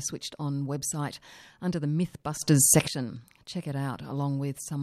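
At 2.42 s, right after "website under the", a sudden gain jump lifts speech and background noise together by about 14 dB. It likely comes from an unramped digital gain change. It lasts until 2.88 s.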